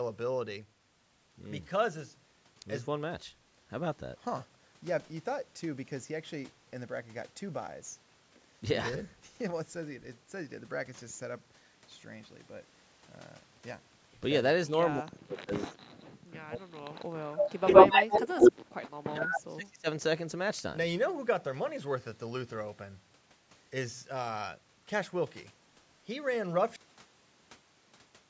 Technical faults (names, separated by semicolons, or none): speech suppressed in double talk; echo leak; cut-off end